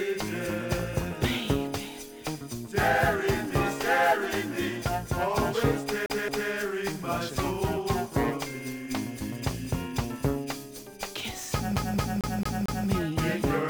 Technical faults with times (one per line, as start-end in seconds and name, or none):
6.06-6.51 CD stuck on one turn
11.76-12.88 CD stuck on one turn